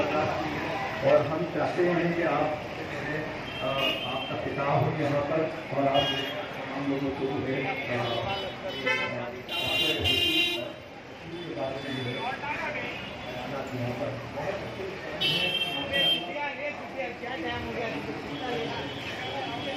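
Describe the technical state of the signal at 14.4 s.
At 14.4 s, clock slip clicks are running, as they do from 0.13 to 19.73 s: a faint, evenly spaced tick roughly every 50 ms, forming a soft rattle. Two unsynchronised clocks, likely about 400 ppm apart, drop or repeat single samples. Unlike irregular dropout gaps, the ticks keep strict regular timing.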